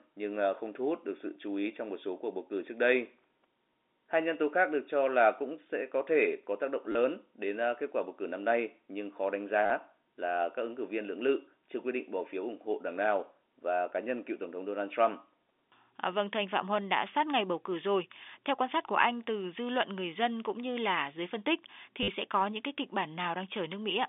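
Packet loss with last packet repeated at 6.92 s (30 ms, after "thể có tác động"), 9.66 s (40 ms, before "là các ứng cử") and 22.03 s (50 ms, after "là dưới phân tích"). Lost audio was filled by replaying the previous packet, so each gap is a robotic stutter buzzing near 100 Hz, which fits 10 ms packets.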